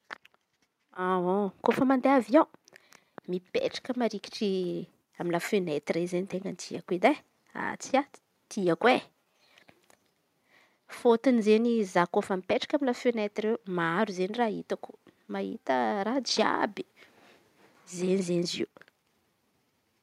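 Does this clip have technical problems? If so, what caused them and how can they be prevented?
No, no technical faults can be heard in this speech recording, so there is nothing to trace or prevent.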